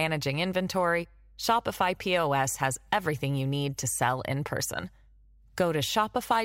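From start to finish the speech carries mains hum, a steady low tone at 50 Hz with some low harmonics, sitting roughly 30 dB below the speech. Power-line current is leaking into the signal path, most plausibly through a ground loop or a nearby transformer.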